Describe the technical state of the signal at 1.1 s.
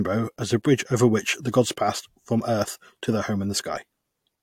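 At 1.1 s the speech signal is intact, with no dropout, clipping, glitch or other fault.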